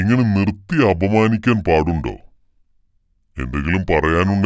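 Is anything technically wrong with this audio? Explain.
Yes. Wrong sample rate throughout: the speech plays back slower than it was captured, without conversion, so speed and pitch fall together to 0.726 times, 5.55 semitones down, which fits 22 kHz material played at 16 kHz. It sounds low, slow and dragging.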